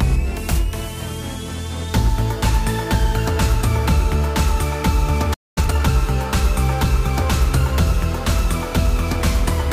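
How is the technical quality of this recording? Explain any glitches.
Two connected glitches interrupt the recording, one straight after the other, just past the midpoint.

Playback stall, 5.33 to 5.58 s: output goes silent for about 230 ms in mid-flow, then resumes. The likely cause is the player's buffer running dry or its thread being blocked, leaving nothing to send until data flowed again.

Time-compressed catch-up, 5.58 to 5.80 s: to recover the lost time, the player drops small slices and cross-fades the remainder, running at 2x speed. The sound is audibly hurried but keeps its normal pitch.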